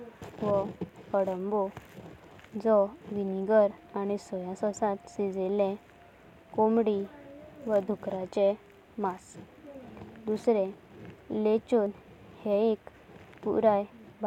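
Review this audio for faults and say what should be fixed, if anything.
The speech has an overlap between stream segments, heard as three tiny skips at 3.89 s, 7.88 s and 11.86 s, the first just before "आनी सोया सासांत". They fall every 4 s, matching 4-second segment boundaries. At each join, overlapping time stamps make the player trim a few milliseconds of audio that was never duplicated, so the waveform jumps forward. Unlike a dropout, nothing goes silent: sound is removed rather than replaced with a gap. Preventing it means stamping segments so each one begins exactly where the previous one ends.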